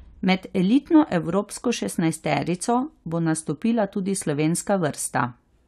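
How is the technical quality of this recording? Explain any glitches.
Nothing stood out as a technical problem when listening to this speech recording.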